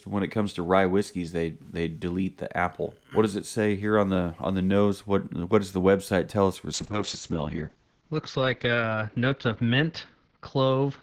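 From 6.74 s to the end, a call bitrate drop takes hold: the encoder falls from 48 to 8 kbps and the audio band shrinks from 20 kHz to 8 kHz, bottoming out for 2.36 s. The speech turns muffled and rough, smeared steadily rather than broken by the gaps of packet loss.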